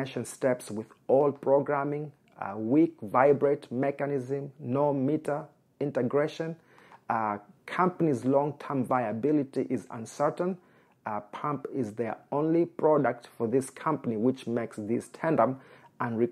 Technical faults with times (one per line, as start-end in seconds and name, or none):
none